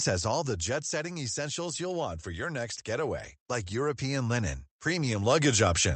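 Automatic gain falling runs from 0.05 to 1.07 s, ending just before "essentials you'll want for". The gain control judged the incoming speech too loud and pulled its gain down over roughly a second, by about 5 dB in total. The opening therefore starts strong and then sinks, with the background room sound dropping in step with the voice, because the whole signal is being scaled rather than just the speech.

Automatic gain rising begins at 2.96 s, right after "want for your next", and continues to the end of the clip. Here the controller decided the level had become too quiet and pushed its gain back up gradually, so voice and background swell together over several seconds instead of holding steady. This audio also passed through a call codec whose band stops around 8 kHz, so the brightest consonant detail is missing throughout.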